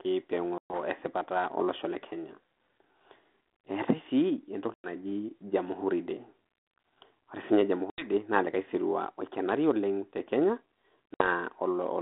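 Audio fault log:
0.58–0.74 s, 4.74–4.88 s, 7.9–8.1 s, 11.14–11.28 s: packet loss on an ADPCM call. Hard-edged silent gaps of 120, 100, 80 and 60 ms appear in the speech. The decoder's adaptive predictor and step size lose track of the sender's, so each gap ends with brief distortion or a level error that settles within tens of milliseconds. The band-limited telephone sound around them fits 32 kbit/s G.726.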